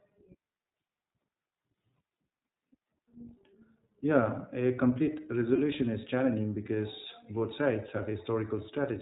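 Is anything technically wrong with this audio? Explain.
Yes. Throughout the clip, the speech sounds band-limited and slightly rough and synthetic, with plainly audible coding damage and nothing above 4 kHz. This is the iLBC codec at work: each 20 ms frame's excitation is coded independently, at a rate that fits iLBC's 15.2 kbps mode.

From 5.56 to 5.59 s, between "a complete" and "is challenging", there is a brief held, faintly buzzy vowel-like sound. These are lost iLBC frames, likely a single 20 ms frame. The decoder filled the gap by repeating the last pitch cycle mixed with noise, and the speech recovers immediately afterwards.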